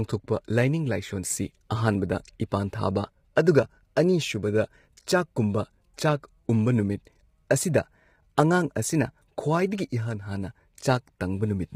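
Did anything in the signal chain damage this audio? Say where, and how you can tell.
Yes, at the codec stage, throughout the clip: the speech sounds rough and grainy, with noise filling the gaps between harmonics. This is likely heavy low-delay AAC compression, whose short frames resolve pitch poorly. The damage points to a low bitrate near 24 kbps. It is steady rather than bursty like packet loss.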